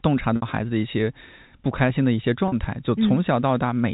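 At 0.36 s the speech briefly freezes into a buzzy, held tone for about 60 ms, and again at 2.48 s for about 40 ms. This is packet loss with pitch repetition: packets went missing, and the receiver looped the last pitch period to cover each gap. The gap lengths fit three and two 20 ms packets.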